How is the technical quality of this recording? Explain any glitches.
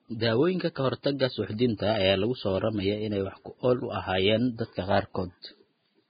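Quality is poor, with heavy coding damage throughout the speech. Vorbis compression, likely at a very low rate of around 15 kbps, runs for the whole clip: nothing survives above about 4.9 kHz, and the coarsely quantised treble turns to hiss, leaving grainy, roughened tones and blurred consonant attacks.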